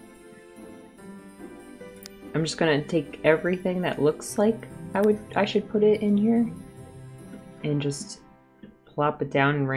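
Nothing stood out on listening to this recording.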